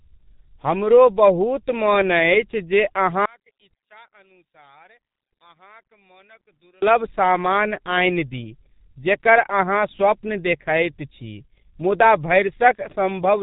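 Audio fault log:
throughout G.723.1 codec: heavy low-rate telephony compression, likely around 6 kbit/s, cuts everything above 3.8 kHz and coarsely models speech, leaving it muffled, hoarse, with smeared consonants.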